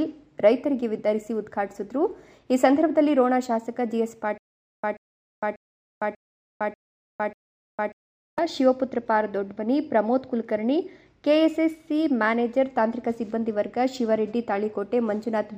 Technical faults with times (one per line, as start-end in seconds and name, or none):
4.38-8.38 stutter with silent gaps